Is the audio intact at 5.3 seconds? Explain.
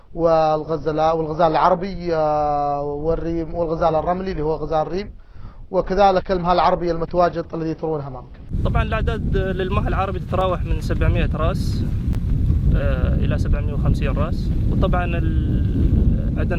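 Yes, the audio is intact at 5.3 seconds, with no fault present at that moment.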